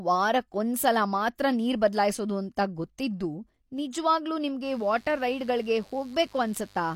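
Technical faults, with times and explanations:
4.64 to 6.95 s, mains buzz: a steady, raspy 50 Hz buzz around 30 dB below the speech, raspier than plain hum because switching spikes add harmonics into kilohertz.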